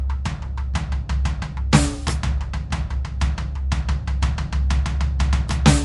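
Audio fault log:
Throughout, MP3 compression: the music is likely encoded as MP3 at a bitrate low enough to starve the encoder, which fits a rate of roughly 54 kbps. To save bits it removes all content above 11.3 kHz, so the top end sounds dull and closed. It also drops quieter frequency detail that flickers in and out between frames, giving plainly audible watery, swirling textures and chirpy metallic edges on bright sounds, while sharp attacks blur.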